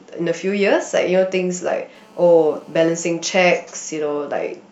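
From 1.95 to 3.07 s, GSM phone buzz: a hard, raspy 217 Hz drone rich in harmonics, about 32 dB below the speech, from a nearby handset's call bursts being rectified.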